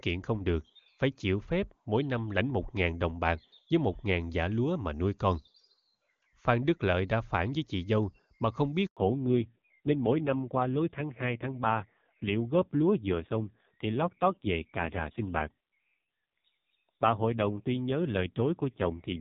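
At 8.87 s a handover gap silences the speech for 100 ms while the call switches networks. It is a clean dropout, not the smeared or buzzy fill that packet-loss concealment would leave.

From 8.97 s to the end, a fallback to narrowband replaces the clear HD Voice sound. Everything above 4 kHz disappears and the speech turns dull and raspy, which fits a low-rate AMR-NB mode of around 5.9 kbit/s. That roughness, not just lost treble, separates it from a simple low-pass filter.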